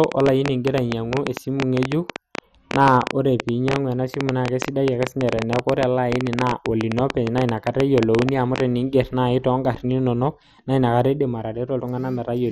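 From start to finish the speech carries heavy MP2 compression damage, most likely from MPEG Layer II encoding at a rate that fits around 56 kbps. Too few bits were available across its 32 sub-bands, so the upper bands drop out and the remaining ones are coarsely quantised. Nothing survives above 13.8 kHz, leaving the speech dull, and a gurgling, granular texture clings to it as bands switch on and off.

From 0.04 s to 8.61 s a train of clicks rides over the audio, likely interference or a faulty connection injecting similar pulses into the signal. They arrive at an uneven pace, averaging 10.2 per second, about a hundred in all, with peaks around 20 dB above the speech. The result is a loud, irregular ticking that is audible through the pauses as well as over the talking, then stops.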